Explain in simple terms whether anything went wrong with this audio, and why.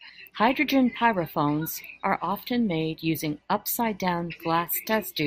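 Nothing went wrong here: the speech runs continuously with no audible fault at any point.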